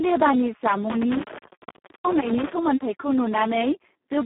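From the start, the Speex codec sounds heavily damaged, hoarse and close to robotic, which fits a very low setting near 4 kbps, with nothing above 3.8 kHz. Between 0.90 and 2.53 s there's an intermittent contact: the line opens for about 0.66 s, cutting the sound with crackle at the edges.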